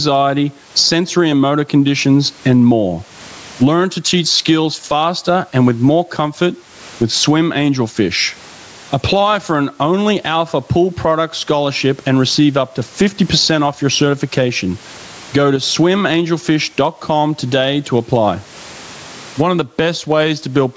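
Speech recording with gain pumping all the way through: the background swells up in every pause and ducks by around 25 dB under each loud syllable. The likely cause is input gain set far too high, with a fast limiter clamping each peak. Unlike a plain noisy room, the noise level moves with the talking. From 15.56 to 15.63 s, one channel drops out. For about 70 ms the level falls abruptly by about 6 dB and then snaps back, likely because one stereo channel was lost before the mono sum. A fade or a dropout would dip gradually or fall to silence instead.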